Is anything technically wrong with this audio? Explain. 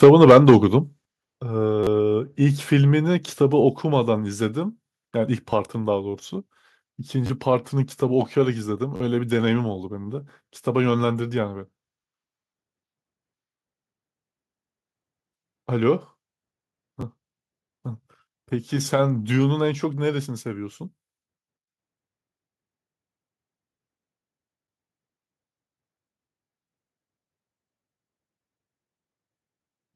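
Yes, there are three kinds of problem, all in the speech.

Microphone overload runs from 0.03 to 0.57 s. The peaks sit about 7 dB past the converter's limit, and a good chunk of the samples, something like 7 percent, get flattened at that limit. The likely cause is an input gain set too hot, so the converter runs out of headroom and slices off the waveform tops. You hear it as a gritty, crackly edge on the loudest syllables in that first half-second.

The microphone volume gets stepped down twice: a small drop of about 2 dB at 0.04 s, right as the clipping starts, then a bigger one of about 7 dB at 1.05 s. Both are instant steps, not fades, so voice and room tone drop together. That pattern suggests the call software saw the overload and cut the device's input gain in one go.

There's a repeated buffer at 1.84, 5.50, 7.26, 8.96 and 17.01 s. Each time a slice of roughly 11 ms gets replayed back to back because fresh audio didn't arrive in time. 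That slice length fits a 512-sample buffer. The hard joins make a short buzzy stutter lasting about 10 to 40 ms, with the one at 8.96 s the longest and the one at 17.01 s just a quick click.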